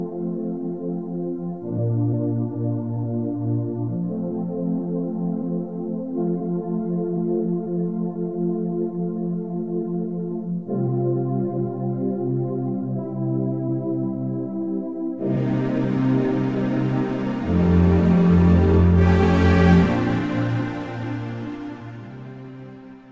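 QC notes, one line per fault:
No faults found. Nothing in the audio calls for a QC note at any point.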